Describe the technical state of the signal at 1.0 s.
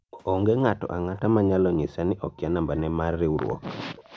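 At 1.0 s the background room sound has collapsed to near silence, dipping by as much as about 40 dB within a gap that runs from 0.75 s to 1.14 s before the ambience returns. This is background gated by the echo canceller. While the far-end loudspeaker was playing, the canceller clamped the microphone down hard to keep that playback from leaking back, taking the room tone with it for roughly a third of a second until it released.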